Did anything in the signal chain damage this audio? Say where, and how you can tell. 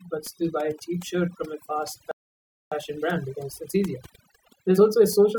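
Yes. Overdone noise removal runs through the whole speech clip, at the call-processing stage. Bands near the noise estimate are pushed down so hard that the background falls to near silence with twinkling specks. A spectrogram shows isolated flecks in blank gaps.

A playback stall cuts the speech off mid-flow from 2.11 to 2.72 s, about 0.6 s of silence. The waveform goes dead flat there. The likely cause is the player's buffer running dry or its thread blocking.

Time-compressed catch-up follows at the playback stage, from 2.72 s to the end, with the speech hurried to about 1.15 times normal speed at unchanged pitch. Small pieces are cut and cross-faded. The spectrogram shows harmonics at their usual spacing but squeezed syllables.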